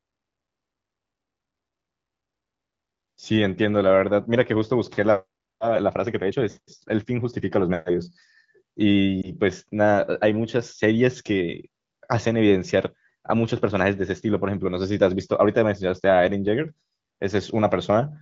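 At 9.22 to 9.32 s, one lost AMR speech frame of 20 ms makes the decoder repeat its last good pitch and vocal tract settings at reduced gain, heard as a brief dip or warble with a short weak recovery, visible as an energy notch on the spectrogram and waveform.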